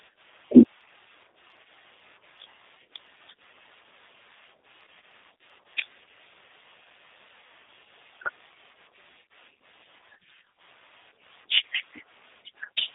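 Speech, audibly roughened by a G.729 codec throughout: synthetic-sounding, fitting an 8 kbit/s link, with spectrogram energy confined between 250 Hz and 3.7 kHz.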